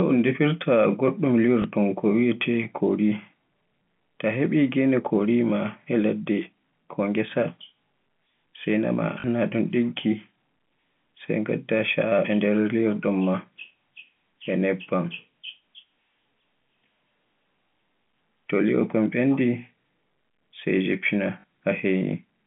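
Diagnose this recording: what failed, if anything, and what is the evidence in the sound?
Network stage: packet loss with last packet repeated, at 1.62–1.64 s between "hautata goɗɗum" and "ko wiyeete", then 9.2–9.24 s and 21.4–21.44 s. The waveform shows a copied 20 or 40 ms block. The spectrogram shows brief 50 Hz banding, fitting 20 ms packets.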